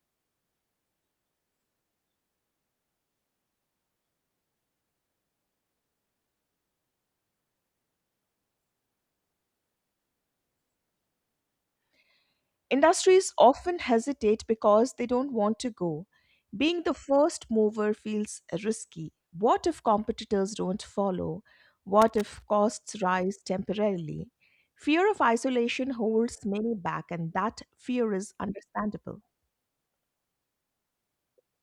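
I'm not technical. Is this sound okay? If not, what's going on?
No. There is a short burst of loose connector crackle from 22.02 to 22.42 seconds. It comes right after "if competitors don't follow" and ends just before "costs rise temporarily". It lasts less than half a second. It sounds like an uneven scratching or crackling noise. This happens when a worn or dirty plug loses contact and then touches again many times in a row. Each break cuts the sound.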